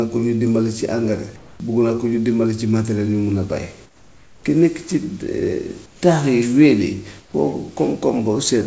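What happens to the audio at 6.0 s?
Discontinuous transmission likely cut in, so from 5.86 to 6.02 s comfort noise replaces the background: a steady, featureless hiss about 7 dB quieter.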